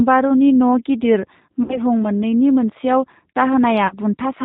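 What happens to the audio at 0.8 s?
At 0.8 s the speech carries G.729 codec damage, as it does through the whole clip. The sound is rebuilt from a vocal tract filter, a pitch predictor and a few pulses per 10 ms frame, so it comes out rough and faintly synthetic, which fits an 8 kbit/s G.729A stream. On a spectrogram, energy stops dead at 4 kHz, leaving the band above empty. The waveform keeps its envelope but loses fine detail.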